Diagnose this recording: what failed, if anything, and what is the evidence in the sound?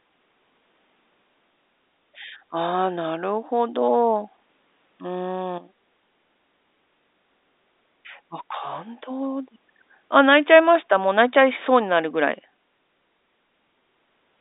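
Nothing failed; no faults heard.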